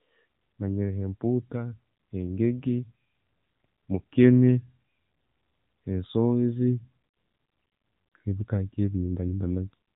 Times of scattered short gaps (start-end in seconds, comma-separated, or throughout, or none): none